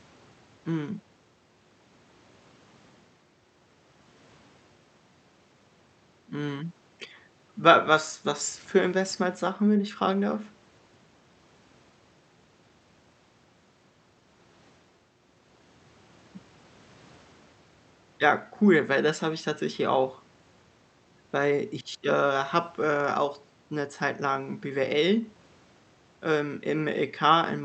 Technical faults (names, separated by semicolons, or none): none